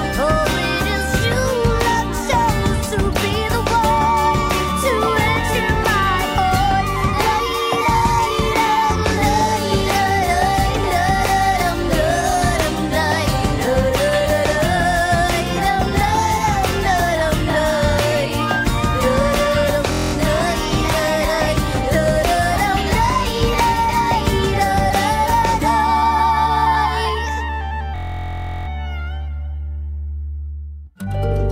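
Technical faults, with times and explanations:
19.92–20.13 s and 27.96–28.68 s, system hang loop: the system stalled and the hardware replayed one 23 ms chunk, so you hear a steady 43 Hz buzz, which fits a 1024-sample buffer.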